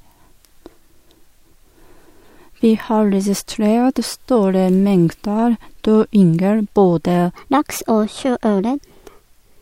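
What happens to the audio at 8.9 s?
At 8.9 s the speech sounds hurried and noticeably higher, about three semitones up, because it falls inside a section at the wrong speed running from 7.36 s to the end at 1.22 times normal. Speed and pitch rise together, likely from playback against the wrong clock.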